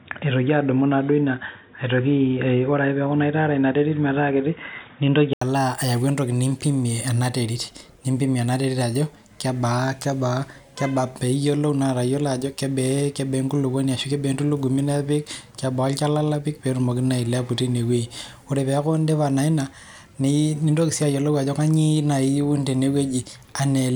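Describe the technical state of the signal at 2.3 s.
At 2.3 s the speech sits inside a band-limited stretch running from 0.0 to 5.41 s, most likely the input switched to a poorer device, such as a headset call profile. Nothing reaches above 3.8 kHz, so the sound is dull and boxy, with a different background noise about 40 dB under the signal and no change in level. Unlike a gradual codec bandwidth drop, it ends abruptly at 5.41 s with a silence of 80 ms before the full band returns.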